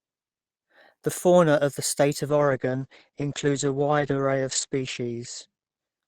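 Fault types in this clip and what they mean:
call bitrate drop: from 2.31 s the encoder's starved of bits, so speech goes rough and muffled, top cut at 8 kHz, suggesting around 9 kbps.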